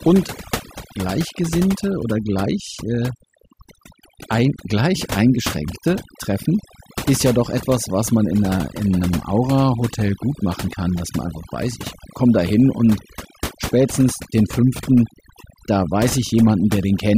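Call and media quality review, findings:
Overdone noise removal, whole clip. Background drops to near silence with twinkling specks. Denoiser set too aggressive, gating bands near its noise estimate, quiet speech detail lost.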